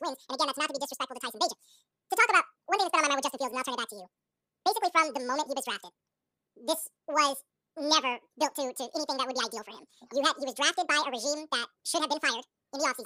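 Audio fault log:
Throughout: audio read two samples at a time (double speed). The speech comes out at twice its proper speed and a full 12 semitones up, so everything sounds like a chipmunk racing through it. What's happened is the reader grabbed each pair of samples as a single frame, as if the stream had two channels or samples twice as wide, so twice the data is consumed per tick.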